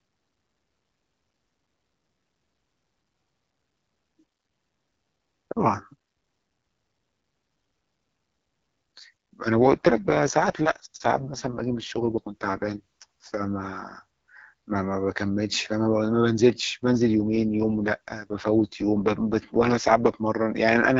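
AMR rate drops occur from 9.55 to 13.26 s and again from 16.84 to 20.16 s in this speech clip. In each stretch the voice turns rough and raspy, consistent with the AMR-WB codec being pushed down from about 12.65 kbit/s to its 6.6 kbit/s mode to free bits for error protection on a weak radio link. The audio band stays the same and nothing drops out, and the voice returns to the lightly coded wideband sound once the rate recovers.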